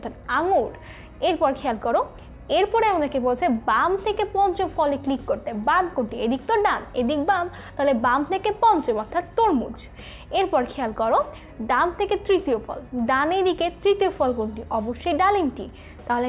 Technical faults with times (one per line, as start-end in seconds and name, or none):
none